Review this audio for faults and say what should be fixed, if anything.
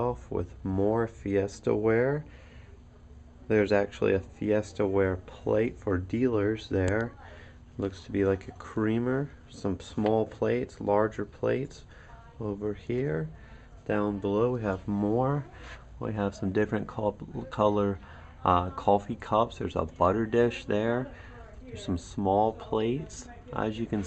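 Nothing should be fixed; the review turned up no faults in this audio.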